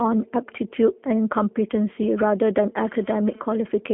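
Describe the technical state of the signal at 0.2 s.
G.729 codec damage runs throughout: speech rebuilt from a vocal tract filter and sparse pulses sounds rough and synthetic, and a spectrogram shows nothing above 3.6 kHz.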